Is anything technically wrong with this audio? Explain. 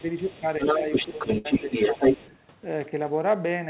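Yes, three kinds of fault are audible in this speech.

Speech suppressed in double talk, at 0.01–0.07, 0.23–0.44, 0.77–0.84, 1.13–1.21 and 1.96–2.01 s: the talker's level dips by about 5 dB, and by about 10 dB at 0.23–0.44 s, likely because the echo canceller turned down everything while both sides talked.

Other side's voice leaking through, from 0.23 to 2.38 s: a second voice is audible underneath, around 5 dB relative to the talker, likely as a residue the echo canceller failed to remove from the microphone.

Burst of packet loss, at 1.38–1.47 s: the last sound is held and faded for 65 ms, then audio resumes with 60 ms missing, because consecutive packets were lost or arrived too late.

Throughout, nothing sits above 4 kHz, which fits a G.711 call path.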